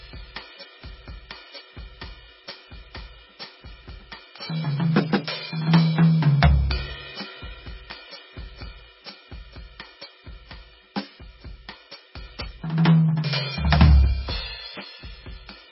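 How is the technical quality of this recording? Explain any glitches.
Poor: heavy damage runs through the whole music clip. The treble stops dead at 5.6 kHz, and what remains sounds watery and swirly, with metallic chirps and smeared attacks. The likely cause is MP3 compression at a very low bitrate, around 17 kbps. Starved of bits, the encoder drops high frequencies and lets weak components flicker between frames. That flicker separates it from a simple low-pass filter, which would dull the sound cleanly without the swirl.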